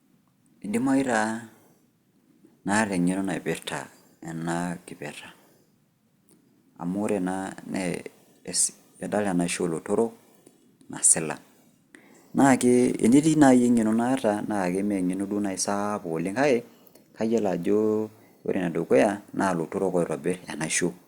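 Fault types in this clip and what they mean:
No audible faults are present.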